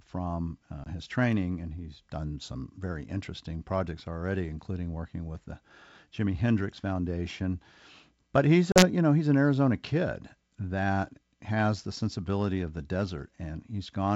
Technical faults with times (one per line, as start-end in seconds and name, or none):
0.84-0.87 packet loss on an ADPCM call
8.72-8.84 packet loss on an ADPCM call